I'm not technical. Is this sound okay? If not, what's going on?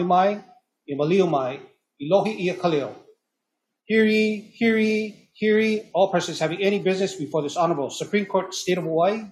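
Yes, it sounds fine: nothing stood out as a problem on listening.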